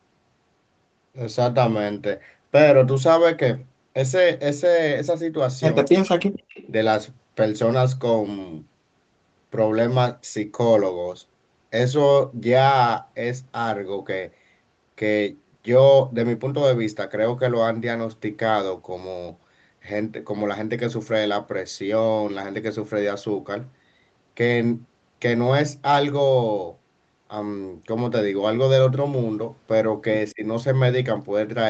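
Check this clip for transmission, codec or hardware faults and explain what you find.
The clip has three kinds of echo-canceller fault, all bunched around 6 s plus one brief event near the end. The audio comes through a band-limited Opus call path, with nothing above 8 kHz, which points to a modest bitrate.

Speech suppressed in double talk, 5.84 to 6.21 s and 30.33 to 30.43 s: the speech itself sinks, by roughly 40 dB in the first case and roughly 20 dB in the second. This is likely the canceller mistaking overlapping far-end sound for echo and turning everything down. Unlike gating, the voice dips rather than the room.

Echo leak, 6.07 to 6.67 s: a faint, delayed copy of the voice trails by 186 ms, roughly 25 dB below the speech. This is likely loudspeaker sound the far-end canceller failed to remove, returned down the line. It is a discrete repeat, not diffuse room reverberation.

Background gated by the echo canceller, 6.49 s: the room tone drops by about 17 dB for roughly 50 ms, then returns. 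The canceller clamps the microphone while the loudspeaker plays. This differs from double-talk suppression because the background dips, not the speech.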